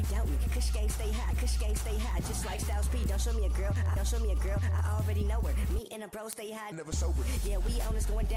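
Running through the audio from about 0.16 s to 8.28 s there's a steady train of ticks, roughly ten a second and some seventy in all, sharp and uneven in strength. That's word clock ticks: the receiving device is free-running on its own clock rather than locking to the sender's, so every time the two clocks slip by a sample, a single sample gets dropped or repeated. The tick rate fits a clock mismatch of around 200 ppm.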